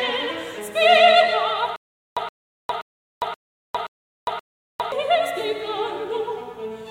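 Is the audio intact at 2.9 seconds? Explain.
No. At 2.9 seconds the music is caught in a stutter with silent gaps that runs from 1.76 s to 4.92 s. A fragment of about 122 ms plays, then about 405 ms of digital silence follows, repeating every 526 ms, six times in all. The likely cause is a stalled player or stream replaying its last buffered fragment at each retry before running empty, so the music that belonged in that span is missing.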